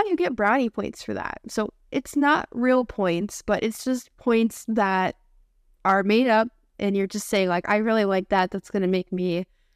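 Hard clipping occurs at 0.46–0.49 s between "you get" and "points for that", at 5.88–6.16 s, and at 7.35–8.39 s after "you're just". The speech peaks overdrive the signal path by about 1 dB, then about 2 dB, so their tops are sheared flat, adding a brittle crackle.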